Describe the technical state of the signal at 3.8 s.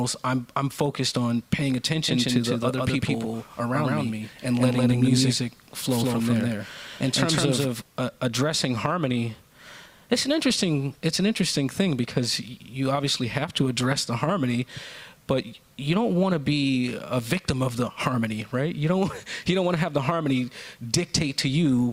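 At 3.8 s you're inside a doubled audio track running 2.08 to 7.82 s: a dry, equally loud copy trails by roughly 150 ms, likely from a second, slower capture path.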